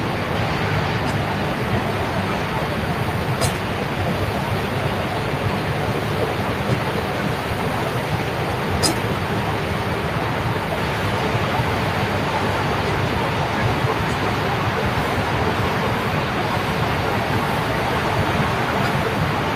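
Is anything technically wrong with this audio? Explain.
No, nothing technically wrong stood out on listening to this recording of sounds.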